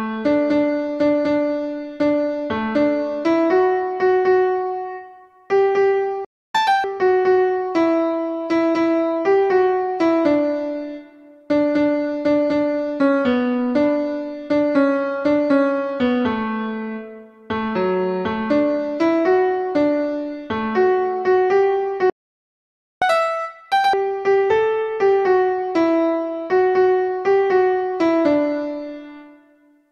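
At 6.25 s the sound cuts out for about 0.3 s, a playback stall, most likely from the player running out of buffered data or its thread being blocked. On a waveform this is a flat line, and a spectrogram shows a blank vertical band. A second, longer stall runs from 22.10 to 23.02 s, a silence of about 0.9 s.

Each stall is followed by catch-up at higher speed. From 6.55 to 6.84 s, and again from 23.02 to 23.93 s, the player resamples its backlog at double speed, so the audio comes back hurried and pitched up by nearly an octave before settling to normal. On a spectrogram the harmonics jump upward and the features squeeze together in time. On a waveform the cycles are visibly compressed.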